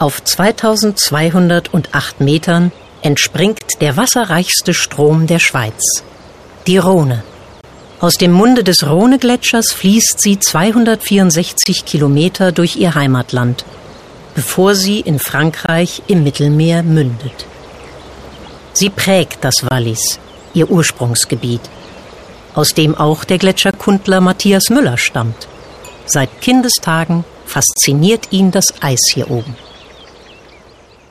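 You've got a gap between chunks problem: hard-edged holes of about 25 ms at 3.59, 7.61, 11.64, 15.66, 19.69, 23.71 and 27.74 s, one every 4 s. That points to the audio being delivered in 4-second chunks with silence inserted at each join.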